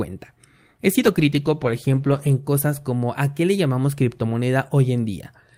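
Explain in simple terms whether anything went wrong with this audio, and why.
A call bitrate drop hits from 1.0 to 2.39 s, just before "cosas como a qué". The connection cut the data rate, so the speech turns rough and muffled.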